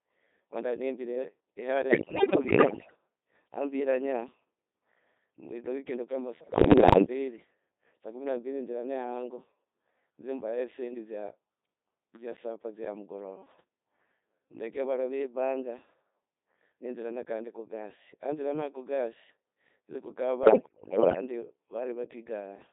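All the way through, it's run through the Codec 2 vocoder, rebuilt from pitch and envelope, robotic and buzzy within 200 Hz to 3.7 kHz, which fits a 2.4 kbit/s mode. Then there are bit errors on digital voice radio at 1.90–2.96 s, 6.40–7.06 s and 20.44–21.22 s. Heavy flipped bits scramble pitch, level and timbre, so it breaks into warbles and bleepy gibberish.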